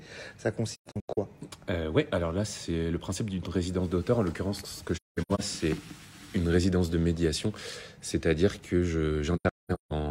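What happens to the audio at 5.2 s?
AAC frame loss with muting hits between 4.96 and 5.40 s: lost frames are decoded as silence, so overlapping windows fade the sound out and back in, leaving soft-edged gaps totalling about 341 ms, the longest run around a fifth of a second.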